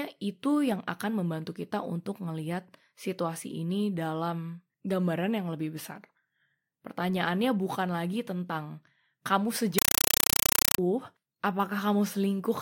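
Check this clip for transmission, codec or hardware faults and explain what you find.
One transmission fault is present. From 9.78 to 10.78 s the speech becomes harsh, very loud chattering static: a compressed stream played as audio, with undecoded AC-3 frames arriving as 5.33 ms noise bursts, 31.25 times a second, between zero padding.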